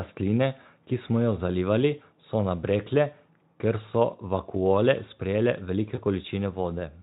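At 5.95 to 5.99 s there is VoIP packet loss concealed by the speech codec: a brief gap, which fits a single lost 20 ms frame, is filled by the Speex decoder repeating its last pitch and filter at falling gain, giving a short buzzy or noisy smear before the speech recovers.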